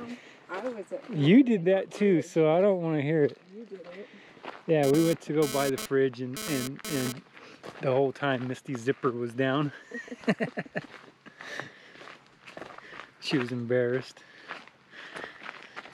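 From 4.83 to 7.12 s there's a GSM phone buzz: a nearby 2G handset sending data in bursts about 217 times a second, with the audio circuit rectifying those pulses. It's a harsh, raspy 217 Hz buzz full of harmonics, sitting about 9 dB under the sound.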